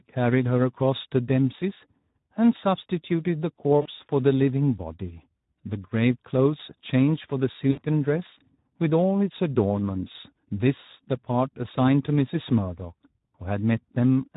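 Speech throughout sounds hoarse and grainy, with the upper band reduced to a hissy, noise-like fill. That is the Speex codec working at a low setting, consistent with roughly 11 kbps, where too few bits remain to model the excitation cleanly. At 3.82 to 3.89 s and again at 7.71 to 7.80 s, the voice briefly smears into a buzzy tone or coloured noise that fades. This is VoIP packet loss concealed by the speech codec: about 40 ms and then 60 ms of audio went missing, and the decoder stretched its last pitch and filter while turning the gain down. The voice stays weak or distorted for a moment after each gap.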